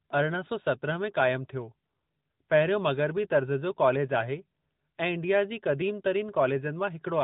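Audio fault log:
Throughout: AMR narrowband mobile codec. The speech is band-limited to telephone quality, with nothing above 4 kHz, which points to 8 kHz sampling. The codec rebuilds each 20 ms frame from a vocal-tract model fed by a few pulses, not from the real waveform. That leaves a plainly audible buzzy, synthetic edge on the voice. The degree of damage fits an upper AMR-NB mode, around 10 kbps.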